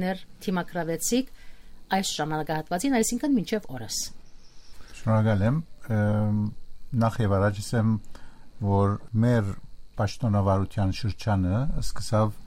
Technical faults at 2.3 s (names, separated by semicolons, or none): dropped samples